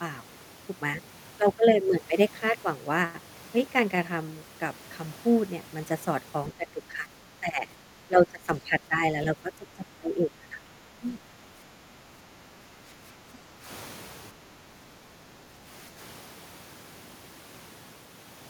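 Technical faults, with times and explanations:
6.52–7.68 s, 8.07–10.64 s, 10.99–11.28 s, 13.55–13.66 s and 15.88–15.99 s: speech suppressed in double talk. The first three stretches get ducked hard, around 15 dB down and patchy, and the last two are just brief light dips. The likely cause is an echo canceller that could not separate the near-end talker from overlapping loudspeaker echo and pulled the near-end speech down too.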